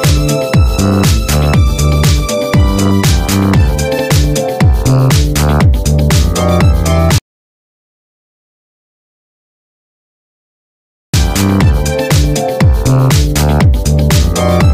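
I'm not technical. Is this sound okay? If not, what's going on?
No, there are two problems. The first is repeated frames, at 3.97 seconds. A tiny slice of sound, about 70 milliseconds long, plays twice in a row. You hear a quick stutter, like a skip on a scratched CD, maybe with a small click where the repeat joins. The audio was stored in small compressed chunks, and a short run of them was written one extra time. The clip runs about 70 milliseconds longer because of it.

The second is an audio dropout to silence, from 7.18 to 11.14 seconds. The sound cuts off suddenly and comes back just as suddenly almost four seconds later. The gap is dead silent, with no room hiss or background at all. Whatever happened in those four seconds is gone. The likely cause is that the sound input was lost for a moment, perhaps a loose cable, a dropped connection or a mute, while the recording kept running.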